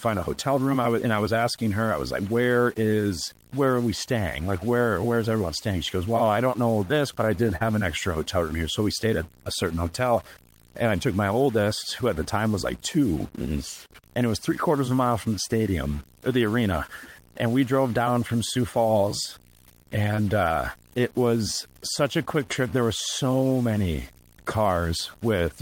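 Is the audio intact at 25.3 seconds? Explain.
No. At 25.3 s, as throughout the clip, the speech carries distortion, and the gaps between phrases fill with a gritty hiss. This is a stuck bit, likely a single data bit held fixed, shifting about half the sample values and flipping with small signals.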